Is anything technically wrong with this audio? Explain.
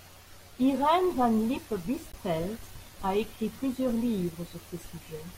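Yes. There is damaged data in a compressed stream from 2.10 to 2.14 s, a 40 ms stretch in the middle of the speech. Some of the encoded bytes at that point were corrupted, so the decoder could not read those frames properly. It lost its place in the stream and had to search for the next valid frame header before decoding resumed. The result is a brief chirp, squawk, click or short hole that breaks into the speech for that instant.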